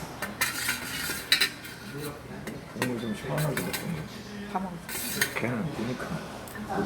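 Listening closely turned up nothing in the recording that stood out as a technical problem.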